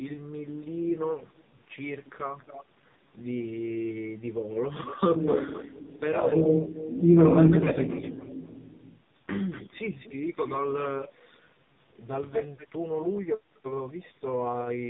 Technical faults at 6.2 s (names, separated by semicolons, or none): AMR narrowband mobile codec; echo leak